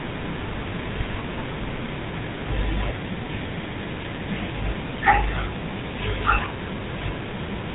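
Throughout the clip, the speech carries GSM full-rate codec damage. A pulse-driven vocal-tract model leaves a buzzy, gravelly roughness, and nothing sounds above 3.8 kHz.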